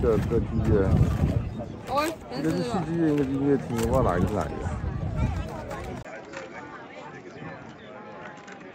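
At 6.03 s the recording likely switched its input to a poorer device, either another microphone or a headset's call profile, and it stays on that device until the clip ends at about 8.7 s. The switch leaves a gap of about 20 ms. After it the band stops near 7.6 kHz, so the sound loses its top and turns duller. The level drops by roughly 5 dB, and a new background noise appears, sitting roughly 50 dB under the signal.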